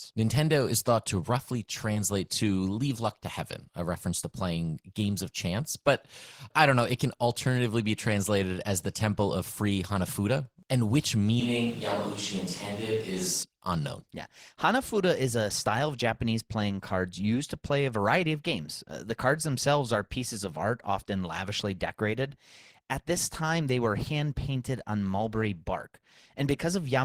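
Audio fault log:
1.93–1.96 s, short concealed packet loss: About 20 ms of the stream, just after "is thought to roughly", did not reach the decoder in time, so the receiver filled roughly 19 ms by extending the preceding sound and then blended back into the real audio. The patch is heard as a brief smear or wobble in the speech, because the decoder can only guess what was missing from what came immediately before it.
11.4–13.43 s, switch to a distant microphone: After "and which", the speech abruptly turns roomy and hollow and thinner in the low end, most likely because the close microphone dropped out and a more distant one took over. The level falls by around 5 dB and room noise rises to sit roughly 25 dB below the speech, since the far microphone hears more of the space than of the talker. The return near 13.4 s is equally sudden.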